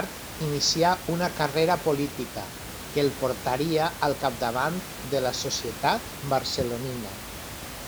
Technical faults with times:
none

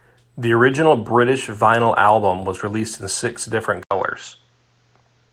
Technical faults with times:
3.83-5.33 input switched to a poorer device

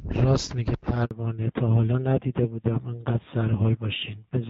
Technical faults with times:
1.05-1.11 handover gap
1.11-4.49 fallback to narrowband

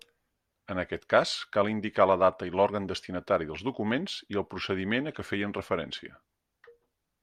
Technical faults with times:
none

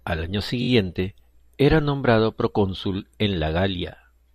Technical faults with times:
0.61-0.68 repeated frames

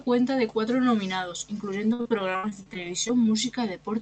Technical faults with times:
1.93-3.11 repeated packet loss (robotic sound)

